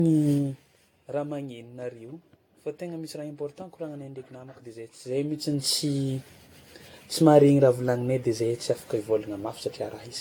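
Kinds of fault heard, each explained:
Generation loss: the speech was likely decoded and re-encoded about five times with an AAC-type codec, each pass quantising again on a shifted frame grid, so errors pile up. The sound is swirly, hollow and smeared, with blurred attacks and nothing above 18.7 kHz.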